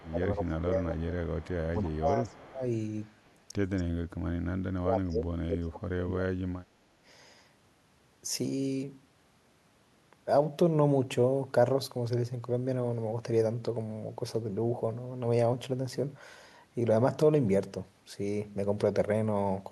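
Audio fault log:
0.0 to 3.31 s, echo leak: faint delayed copies of the speech trail the talker by about 278 ms, at 0.0 to 0.09 s, 1.27 to 1.7 s, 2.27 to 2.37 s and 3.04 to 3.31 s. The first two sit roughly 25 dB below the speech; the later two are fainter, around 35 to 40 dB down. The likely cause is a far-end loudspeaker feeding its microphone, with the echo canceller leaving residue that returns at a fixed delay.
0.1 to 6.92 s, speech suppressed in double talk: the talker's level sags and breaks up at 0.1 to 1.24 s, 1.73 to 2.63 s and 4.66 to 6.92 s, dipping roughly 20 to 25 dB in the first two and as much as roughly 35 dB in the last, about two seconds long. This likely happens because both sides talk at once and the echo canceller cannot tell its own talker from loudspeaker echo, so it attenuates everything.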